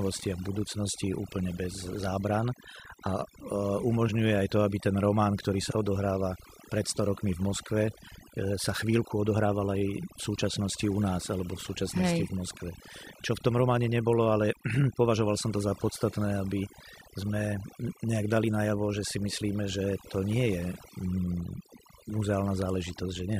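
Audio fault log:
Throughout: overdone noise removal. Noise reduction pushed too hard drops individual frequency bands whenever they sit near the noise estimate, taking soft speech detail with them. Unlike a plain gate or steady hiss filter, pauses fall to near silence sprinkled with twinkling specks.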